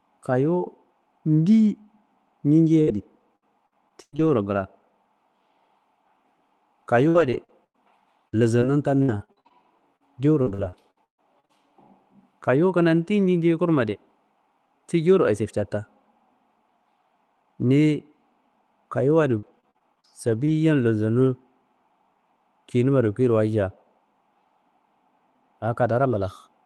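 Repeated packet loss (robotic sound) hits this speech at 2.81 to 4.29 s, 7.09 to 11.59 s and 19.02 to 20.49 s. Lost packets leave short holes, the longest 138 ms. Each is patched by stretching the last sound. The speech turns choppy, longest in the middle stretch.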